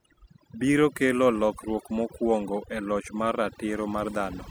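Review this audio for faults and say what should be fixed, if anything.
Overdone noise removal runs through the whole speech clip. The noise reduction was pushed too hard. Each frequency band that falls near the tool's noise estimate gets turned far down or switched off. Quiet parts of the voice sit near that estimate, so they vanish too. The background drops and breaks up into twinkling specks. Fix it by reprocessing the original recording with gentler settings. To prevent it, set the reduction amount lower and check by ear that the voice keeps its body.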